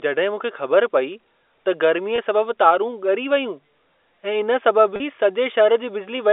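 Telephone-band speech carried over G.711 shows packet loss with pitch repetition at 2.16 to 2.18 s and 4.96 to 5.00 s. About 20 ms, then 40 ms, went missing, consistent with one and then two lost packets. Unlike a hard dropout, the gaps aren't silent: the last pitch period repeats, heard as a brief held, buzzy tone.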